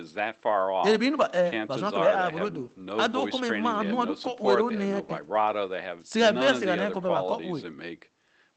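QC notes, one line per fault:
No faults detected in this speech clip.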